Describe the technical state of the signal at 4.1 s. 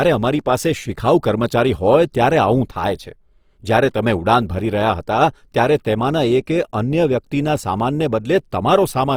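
At 4.1 s the speech is grainy and rough throughout, likely from Opus compression near 24 kbps filling bands with noise, hence less MP3-style swirling.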